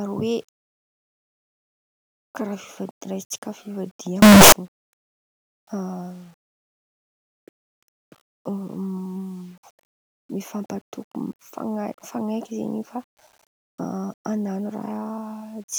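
Speech, broken from 4.22 to 4.52 s by distortion that makes soft and strong sounds equally loud, likely signed and unsigned mixed up in 8-bit samples: the waveform leaps across its range at each zero crossing, a broadband smear on a spectrogram.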